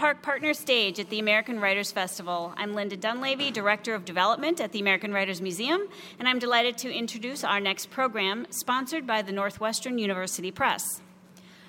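GSM phone buzz runs from 0.33 s to 2.73 s, a hard, raspy tone at about 217 Hz sitting roughly 30 dB below the sound and carrying a dense stack of harmonics that has nothing to do with the audio itself. A nearby 2G handset was transmitting its time-slot bursts 217 times per second. The audio circuitry rectified those radio pulses into a square-edged buzz. It stays nearly steady, as a handset in an active call does, rather than sputtering in and out.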